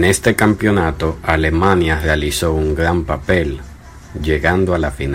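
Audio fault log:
0.03–0.80 s and 1.30–2.14 s, hard clipping: the speech is driven about 9 dB past full scale in the first stretch and about 4 dB in the second, just before "un gran", so peaks get sliced flat, spraying high harmonics that come across as harsh fuzz, worst early on.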